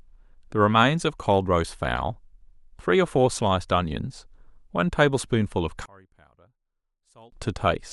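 From 5.86 to 7.32 s the speech collapses by about 30 dB, leaving only a faint residue. The likely cause is one channel inverted, cancelling the centred content in mono. A waveform shows a sudden near-flat stretch, and a spectrogram fades almost to blank.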